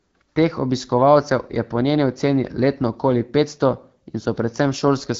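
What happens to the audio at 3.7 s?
Nothing goes wrong at 3.7 s: the speech carries straight through that moment with no dropout, click or distortion, only the light coloring of the AMR wideband (HD Voice) codec at 12.65 kbit/s.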